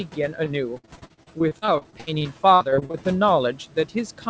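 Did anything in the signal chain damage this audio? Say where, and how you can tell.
Yes. The call processing stage damaged it with noise suppressor artifacts across the whole clip. The suppressor decides frame by frame which bands hold steady noise and pulls them down, here by about 12 dB. The room noise therefore drops away in the pauses and swells back under the speech. On a spectrogram the background shows as a blotchy, flickering floor that darkens between syllables and fills in beneath them.

The network damaged it too, with repeated packet loss (robotic sound) from 0.44 to 3.03 s. About two dozen holes open in that span, the longest around 60 ms. Together they make up roughly a quarter of it, about 0.7 s. The receiver patches each hole by stretching the last sound, which gives the choppy texture. In the waveform, smeared periodic stretches stand in for real speech. On the spectrogram, harmonics freeze into flat bands under an 8 kHz ceiling that comes from the G.722 codec.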